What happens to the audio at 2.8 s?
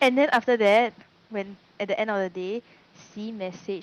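Nothing goes wrong at 2.8 s; the speech carries on intact there, with only the room's own background noise sitting about 31 dB beneath it.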